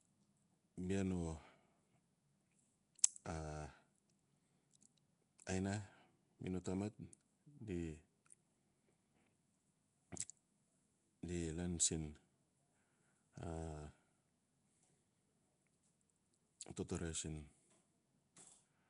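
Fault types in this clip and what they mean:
Nellymoser compression: The speech has a rough, hissy halo and a smeared, underwater feel all the way through, with nothing above 10.6 kHz. That points to the old Flash microphone codec, likely Nellymoser Asao at around 44 kbps, which starves weak bands and fills them with noise.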